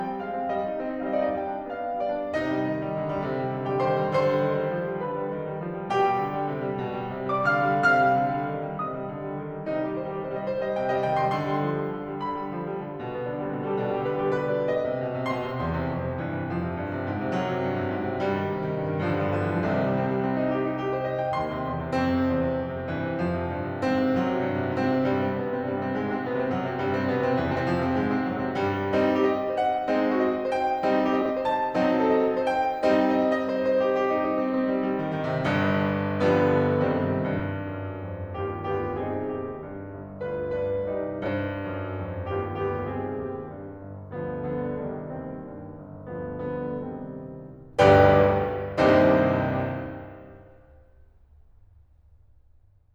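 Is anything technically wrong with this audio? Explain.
Yes. The music has frames out of order at 27.51, 31.21, 37.37 and 41.23 s. Two neighbouring blocks were decoded in swapped order: 40 ms each in the first two, 20 ms in the last two. Each sounds like a brief garbled flutter. No time is lost.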